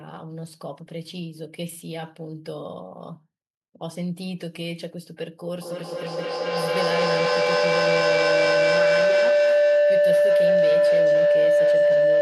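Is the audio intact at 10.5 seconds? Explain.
No. At 10.5 seconds the clip is inside a feedback howl that runs from 5.61 s to the end. Two devices in the same room share the call, so sound loops from loudspeaker to microphone and back. Each trip adds level instead of losing it. The repeats narrow to a tone of around 500 Hz. The loop comes round roughly every fifth of a second, and the howl peaks about 12 dB above the speech.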